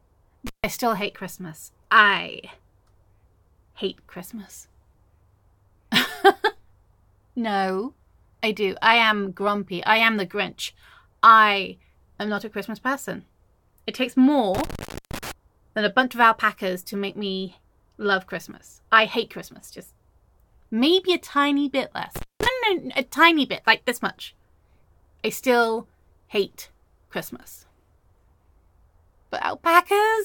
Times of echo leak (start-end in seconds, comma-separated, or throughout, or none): none